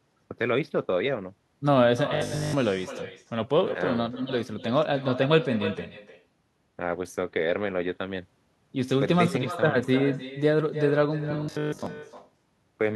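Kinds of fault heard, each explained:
Echo with no canceller: every phrase is trailed by a quieter, thinner copy of itself arriving about a third of a second later, sitting about 12 dB below the speech for the whole recording. The far end is playing the call over a loudspeaker, its microphone catches that playback, and nothing strips it out, so the talker's own speech travels the network round trip and returns as a constant shadow.
Robotic sound from repeated short buffers: between 2.14 and 2.54 s, and again from 11.21 to 11.87 s, the speech collapses into a rigid metallic buzz pitched at 50 Hz that only loosely tracks the speech. This is likely the receiver running short of fresh audio and looping a 20 ms slice to fill the gap. In the first stretch the sound is almost entirely repeats, and in the second most of it is.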